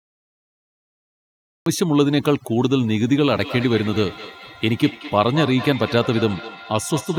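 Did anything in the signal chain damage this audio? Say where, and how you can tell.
Yes. The recording or stream began late, a cut-off start at the storage or capture stage. Nothing was captured for the first 1.66 s, so the file holds pure digital silence until then. At 1.66 s the speech appears already in progress, with no natural attack or fade-in. The jump from digital silence straight into mid-sound is what gives away a late start rather than a quiet talker.

Call processing also failed, with feedback echo between two devices. Two devices sharing one room were on the same call. One played back what the other's microphone sent, and that microphone picked it up again. Each device's echo canceller only removes its own playback, so the loop passed through uncancelled. From 3.34 s to the end, each phrase comes round again at an interval of roughly a fifth of a second, reaching about 14 dB below the direct speech.

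A further fault runs throughout: overdone noise removal, a noise-reduction stage set far too strong. It pulls individual frequency bands down or off whenever they sit near its noise estimate, and the quieter parts of the speech are removed along with the noise. You can hear it in the background, which collapses to near silence with twinkling specks.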